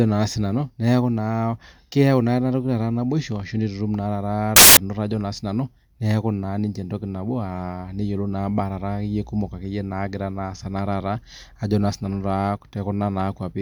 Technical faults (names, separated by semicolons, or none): samples built from the wrong bytes